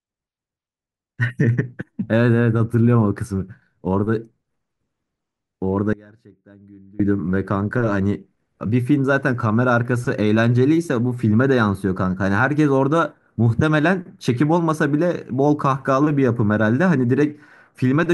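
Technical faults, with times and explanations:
5.93–7.00 s, audio dropout to a faint residue: the speech cuts out abruptly for about 1.06 s, leaving only a faint leak of it roughly 25 dB below normal level, then snaps back. This is likely a brief signal loss upstream while the path after the break stayed live.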